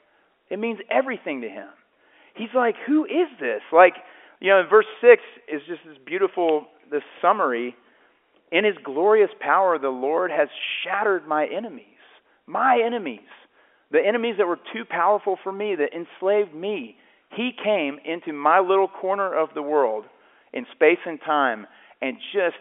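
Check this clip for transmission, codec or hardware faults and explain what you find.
No transmission, codec or hardware faults are audible: the speech sits in the usual telephone band of roughly 300 Hz to 3.4 kHz, consistent with ordinary G.711 A-law line coding, and nothing in it calls for further explanation.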